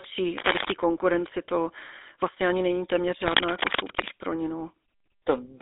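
A buzzy, gravelly roughness sits on the speech from start to finish, and the sound is thin and boxed-in, with nothing above about 3.8 kHz and little below about 250 Hz. This is the GSM full-rate codec at 13 kbps. It rebuilds the voice from a vocal-tract model driven by a coarse train of regularly spaced pulses, so the natural excitation is replaced by a grainy buzz. The narrow telephone band removes the upper range.

From 0.38 to 0.72 s, just before "konkurenci to vlastně ani", a burst of rustling, scratchy noise breaks over the sound at roughly the same loudness as the speech. A longer spell of the same scratching runs from 3.20 to 4.09 s, between "vlastně ani není téměř" and "pro ní". This is cable scratch noise, likely from a worn cable, connector or control being moved. The shifting contact resistance sprays dense, irregular crackle into the signal.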